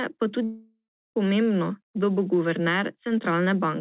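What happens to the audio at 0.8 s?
At 0.8 s you're right in the middle of a gap that runs from 0.44 to 1.17 s, which sounds like a long network dropout, likely packets that never arrived. The receiver stretches the last bit of sound into a fading buzz, then there's roughly a third of a second of near-silence before the audio picks up again, with about 0.72 s of material simply gone. Everything stays band-limited to 4 kHz, as you'd expect from G.711 on the call path.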